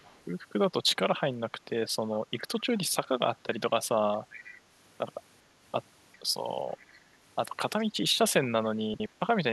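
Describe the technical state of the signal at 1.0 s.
At 1.0 s the speech signal is intact, with no audible fault at that moment.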